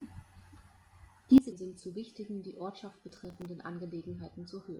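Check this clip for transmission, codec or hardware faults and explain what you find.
There are three separate problems in this speech clip: a level drop, a brief decoding glitch, and a patch of crackle.

At 1.38 s the level falls by about 17 dB in one step, and it stays down through the end of the recording. Speech and background noise drop together, so this is a sudden gain jump rather than the talker backing off. The likely cause is a digital gain setting or bit shift applied instantly, without any ramp to ease the transition.

At 1.51 s there's a short blip of under 20 ms. That's damaged data in a compressed stream. A few bytes in that stretch were lost or corrupted, so the decoder couldn't read those frames properly. It lost sync and had to hunt for the next valid frame header before normal playback resumed.

From 3.09 to 3.46 s there's a gritty, tearing crackle riding on top of the speech, and it clears once that stretch ends. 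That's processor overload crackle. The processor fell behind and missed a run of buffer deadlines in a row, something like a dozen or more. The texture points to very small buffers, on the order of a millisecond or two. Each missed buffer replayed stale audio with hard edges, and those edges stack up into the rough sound.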